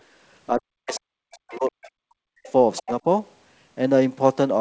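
From 0.49 to 2.45 s the speech is suppressed in double talk. Across roughly one and a half seconds of that span it dips or cuts out in pieces, by as much as about 40 dB, likely because the echo canceller mistook the talker for loudspeaker echo. Unlike a network dropout, the gaps track the far talker's activity.

Within and after that span, the other side's voice leaks through, at 0.91–1.0, 1.51–1.58, 1.83–1.87, 2.45–2.52 and 2.76–2.92 s. These are faint scraps of a second voice, the last being the loudest, and they are not echo of the talker's own speech. At 2.8–3.05 s the speech briefly ducks again, for about a tenth of a second.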